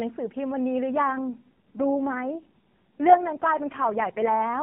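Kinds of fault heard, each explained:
AMR rate drop: The speech comes over a narrowband mobile codec, with nothing above 4 kHz. From about 0.91 s to 4.62 s the codec switches to a much lower bitrate. The sound fits a step down from 12.2 kbps to 4.75 kbps. The band stays the same and nothing drops out. Fewer bits remain to describe the voice, so it turns buzzier, rougher and more synthetic. The change lasts almost to the end.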